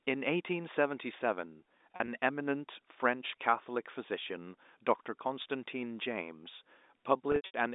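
Around 1.93 to 2.08 s the speech briefly holds and buzzes in short bursts. At 5.42 to 5.44 s there is a single catch. From 7.32 to 7.54 s the sound sticks and fades several times, with the longest gap near 80 ms. This is packet loss with pitch repetition: lost stretches of about 80, 20 and 180 ms were filled by repeating the last pitch period and fading it out. The telephone band of about 250 Hz to 3.7 kHz stays audible throughout.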